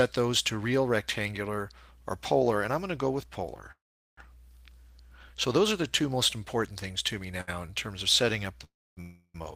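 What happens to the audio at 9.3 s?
At 9.3 s the sound has stalled: from 9.01 to 9.36 s the last sound is drawn out as a fading buzz or hiss for about a third of a second, then there is a brief silence before the audio resumes where it stopped. This is a call audio freeze, likely from late packets draining the jitter buffer; nothing is lost, but everything after arrives about 333 ms later.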